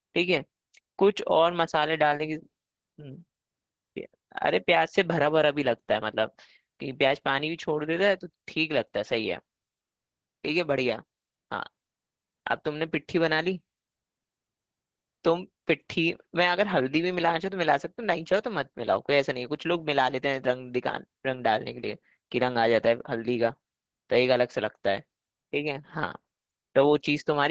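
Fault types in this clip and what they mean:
Opus voice compression: low-rate linear-prediction speech coding that caps the band at 8 kHz and quantises the excitation coarsely. Throughout the clip the speech sounds muffled, hoarse and somewhat robotic, heavy damage that fits a bitrate around 10 kbps.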